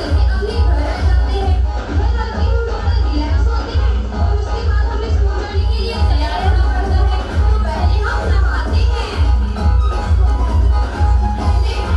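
From 1.4 to 5.8 s, digital radio blending to analogue: the FM fallback drops level about 2 dB and adds faint hiss.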